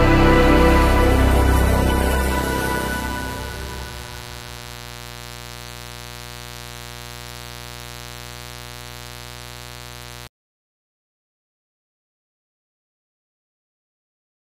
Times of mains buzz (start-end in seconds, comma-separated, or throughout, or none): 2.27-10.27